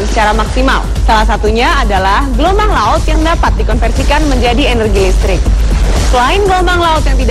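At 3.05 s a corrupt frame is decoded, and the damage lasts until about 3.16 s, roughly 110 ms, which points to about two compressed frames being hit. Flipped bits in those frames led the decoder to misread gains and spectral codes, so energy was rebuilt at the wrong frequencies. The result is a short, harsh chirp-like burst of noise sitting on top of the audio, peaking loud, at around -5 dBFS.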